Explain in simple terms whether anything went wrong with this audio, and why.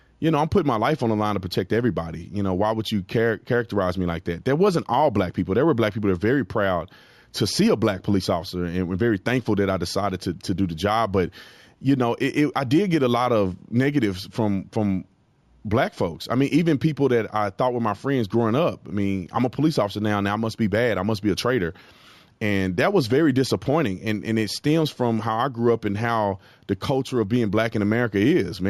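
Throughout the recording, the speech shows imaging from linear upsampling. The rate was raised crudely, likely from 16 kHz to 48 kHz, by joining samples with straight lines. That dulls the top end and leaves faint mirrored copies between 8 and 16 kHz, heard as a light metallic shimmer on hissy sounds.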